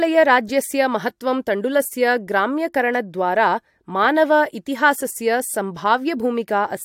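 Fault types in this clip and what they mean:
No technical faults are audible anywhere in the speech, and the signal stays continuous and stable throughout.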